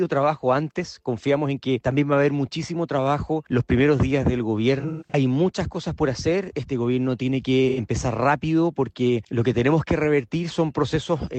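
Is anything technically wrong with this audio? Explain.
Yes. AAC frame loss with concealment occurs at 4.79–5.14 s and 7.69–7.79 s. The decoder rebuilt missing frames from the last good spectrum, leaving smeared, phasey patches, the longest gap about 150 ms.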